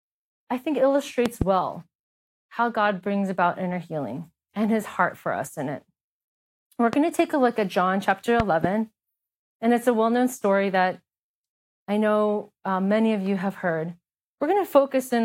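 A voltage pulse, likely from a plug, switch or static discharge, hit the signal path three times, causing a loud pop well above the speech: a double pop at 1.26–1.44 s after "I think", a single one at 6.93–6.96 s before "to take a look", and another double at 8.40–8.67 s.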